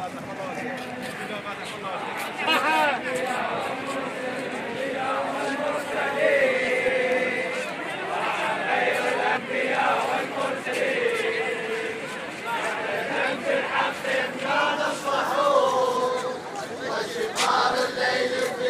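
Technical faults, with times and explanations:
2.46, 4.74, 9.36, 10.66, 14.19 and 15.95 s: compressed frames skipped. Runs of 23.2 ms frames went missing or were rejected by the decoder, so the audio jumps ahead by roughly 100 to 200 ms each time. The overlapping frame edges smear each join into a short blip rather than a hard click.
5.94 to 7.12 s: CD scratch ticks. A disc blemish corrupted more data than error correction could rebuild on each rotation, so the player concealed the bad samples. The result is six evenly spaced ticks, about five per second, each lasting no more than a couple of milliseconds.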